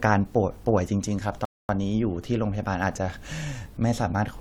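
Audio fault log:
1.45–1.69 s, rebuffering stall: the player drained its downloaded audio and halted until more data arrived, so the speech drops to silence for 0.24 s and then resumes exactly where it left off, with nothing lost but the clip stretched by that gap.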